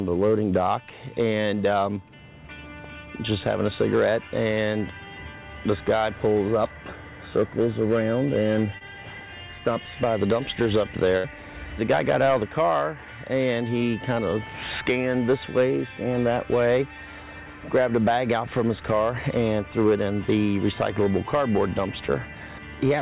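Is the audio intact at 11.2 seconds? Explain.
No. Between 11.17 and 11.27 s a burst of packet loss left the receiver with nothing to play, so it covered a gap of about 65 ms by carrying the last sound forward and turning it down as the gap went on. That fill is heard as a held, fading continuation of the preceding sound rather than a clean cut. Around 60 ms of the original audio never arrives, so when playback resumes it jumps ahead and that stretch is simply gone.

The same moment also carries the hard clipping present throughout the clip. Somewhere in the chain the signal was driven roughly 6 dB past what a stage could pass, so its peaks were sliced flat. Only a small share of samples, around one or two percent, exceed that limit, and those flattened tops add harmonics high in the spectrum that are heard as distortion on the loudest moments around the dropout.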